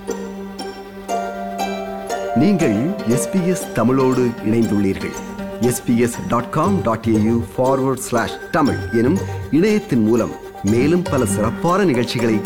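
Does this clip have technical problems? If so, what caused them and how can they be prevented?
No, nothing stood out as a technical problem on listening to this clip.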